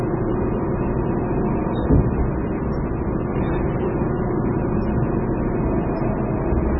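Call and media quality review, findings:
MP3 compression across the whole clip. Nothing above 5.5 kHz; watery, swirly texture, smeared attacks. Heavy damage, likely a very low bitrate encode, around 16 kbps.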